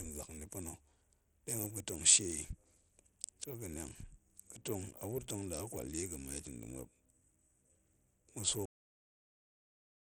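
From the start, the speech carries a gritty, grainy noise and treble that flickers in and out instead of staying steady, plainly audible throughout. This points to Bluetooth SBC compression, likely at a low bit pool around 80 kbps, starving the upper sub-bands of bits and quantising the rest coarsely.

At 8.66 s the speech stops mid-sound and drops straight to digital silence, with no natural decay, through to the end. This is a cut-off end: the final buffers were never written or played back, so the sound is abruptly truncated.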